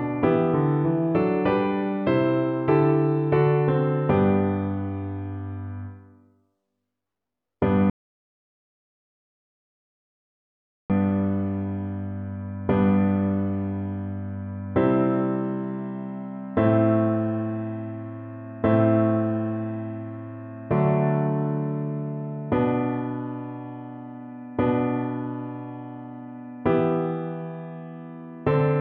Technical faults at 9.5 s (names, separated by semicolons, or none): rebuffering stall